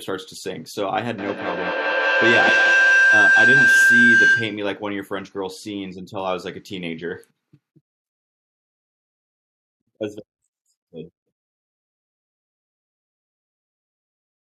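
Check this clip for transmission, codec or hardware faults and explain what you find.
One fault stands out: a feedback howl from 1.18 to 4.75 s. A narrow tone of around 1.5 kHz swells over the speech, peaking about 9 dB above it, and pulses at roughly a fifth of a second. The cause is acoustic coupling: a loudspeaker's output reaches a microphone on the same call and is sent back out louder each trip. The loop's delay sets the pulsing, and the frequency it favours sets the tone.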